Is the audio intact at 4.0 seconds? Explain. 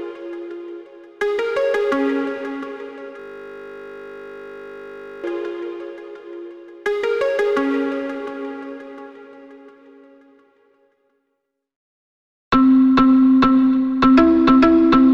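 No. At 4.0 s the audio sits inside a system hang loop running from 3.20 to 5.24 s, where the sound collapses into a steady 50 Hz buzz. A 20 ms slice repeats exactly, about a hundred times in a row. This happens when the computer or driver stalls and the sound hardware keeps replaying the same stretch of its ring buffer. Because the loop is so short, the repeats fuse into a tone at the loop rate.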